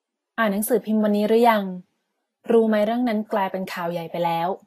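Throughout the speech, the sound is consistent with a transform codec running short of bits, likely Vorbis coding at a low quality setting, around 29 kbps. The encoder has quantised the upper spectrum so coarsely that fine detail is replaced by noise of similar energy, and nothing survives above 14.2 kHz. The damage is plainly audible: the treble sounds hissy and grainy, tonal parts of the voice take on a rough texture, and onsets lose their crispness.

From 2.44 to 2.49 s comes a pre-echo. A sharp attack arrived late in one transform block, and the quantisation noise sized for that loud moment was spread across the whole block, including the quiet stretch before it. The result is a short hiss that leads the onset by about 53 ms, so the attack seems to begin early and sounds softened and smeared rather than clean.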